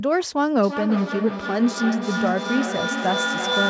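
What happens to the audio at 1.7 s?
At 1.7 s the speech is inside a feedback echo between two devices, running from 0.63 s to the end. Another device's microphone re-captures the playback, so each phrase returns roughly every third of a second, growing thinner and ringier. Unlike room reverberation, the repeats come at a fixed spacing and stack up, reaching about 1 dB below the speech.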